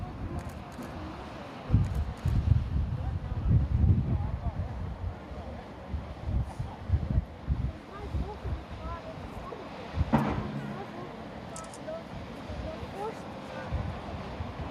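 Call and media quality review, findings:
No call or media quality faults found in this review.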